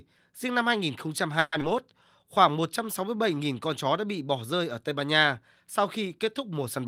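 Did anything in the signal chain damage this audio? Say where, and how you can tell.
Yes. At the network and jitter buffer stage, from 1.39 to 1.55 s the last sound stretches into a fading buzz for 130 ms. A call audio freeze is likely, and unlike a skip, nothing is lost.

Just after, at 1.60 to 1.64 s, playback skips ahead. About 70 ms of speech is gone and the two sides are joined almost seamlessly, which sets it apart from a freeze.

A jitter buffer slow-down runs from 2.24 to 3.36 s. Repeated pitch periods add 78 ms, so speech plays at 94% speed with unchanged pitch, unlike a tape-style slowdown.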